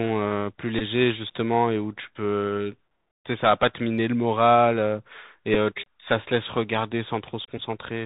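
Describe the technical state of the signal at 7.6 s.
Bluetooth headset packet repeated: between 7.58 and 7.60 s, lost voice packets, which fits about three in a row, were replaced by replaying the previous packet's bits, giving a brief buzz near 267 Hz over roughly 11 ms. The Bluetooth CVSD headset codec also runs through this moment at 64 kbps, its one-bit delta coding cutting everything above 4 kHz and leaving audible granular hiss and distortion.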